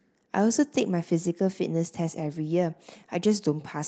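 Nothing goes wrong anywhere in this stretch of speech; it just has the familiar sound of a call, with the top end stopping at about 8 kHz, which fits an Opus call path set to that bandwidth.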